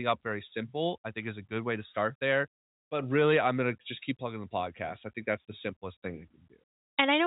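Listening to this speech, carried over G.711 telephone coding with nothing above 3.8 kHz, nothing stood out.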